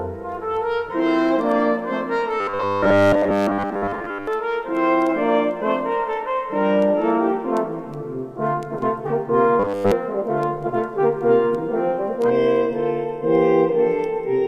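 The audio breaks into a rigid, metallic buzz from 2.40 to 4.27 s and again from 9.60 to 9.92 s, with the buzz at 100 Hz. This is robotic sound from repeated short buffers, likely caused by new audio arriving too slowly, so the same 10 ms slice is replayed over and over. That covers most of the first stretch and all of the second. Unlike plain stutter or dropouts, the repeats fuse into a steady tone that still loosely follows the contour of the original sound. From 12.30 s to the end, the sound turns hollow and phasey. This is channel delay (comb filtering): one channel lags by under half a millisecond, and when the two are summed to mono, cancellation carves evenly spaced notches beginning around 1.5 kHz. The notches stay fixed, and that steadiness sets it apart from the sweeping movement of a flanger and from the broad, even loss of a simple low-pass dullness.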